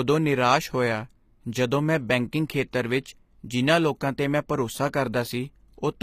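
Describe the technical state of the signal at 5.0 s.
At 5.0 s the speech carries plainly audible codec damage, present across the whole clip. Sibilants sound gritty and metallic, and nothing remains above 15.5 kHz. The likely cause is HE-AAC compression at a low bitrate near 24 kbps, where the treble is rebuilt by copying lower bands upward.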